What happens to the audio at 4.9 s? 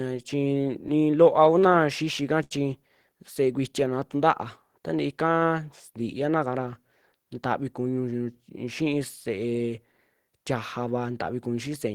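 Nothing goes wrong at 4.9 s: the speech continues intact through that moment, with no dropout, click, distortion or other fault to be heard.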